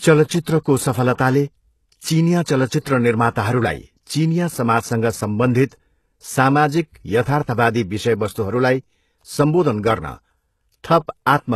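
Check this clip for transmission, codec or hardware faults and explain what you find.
The speech in this clip shows two codec faults: constant band-replication damage across the whole recording and several brief pre-echoes ahead of sharp attacks.

Throughout, the treble sounds synthetic and gritty, with nothing above 12.3 kHz, which points to HE-AAC compression at around 16 kbps. The upper band is likely rebuilt by copying lower bands upward under a coarse envelope, so s sounds come out metallic and lispy.

Pre-echo appears at 0.42–0.46 s, 1.13–1.19 s, 2.80–2.86 s, 3.34 s and 5.66–5.72 s, each lasting about 19 to 58 ms. Quantisation noise meant for a loud attack spills back into the quiet just before it, leaving a short hiss and a smeared onset.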